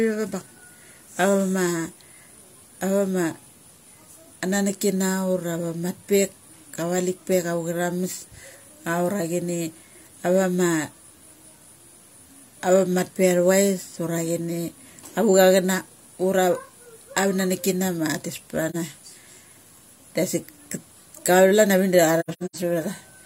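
At 18.70 s the speech drops into a brief, soft-edged hole of about 43 ms, fading out and back; at 22.19–22.57 s several such gaps, 256 ms in total spread over about 340 ms and the longest about a tenth of a second, stutter the sound. This is AAC frame loss with muting: lost frames were decoded as silence, the overlapping windows smoothing each edge, which fits one frame lost first, then a cluster.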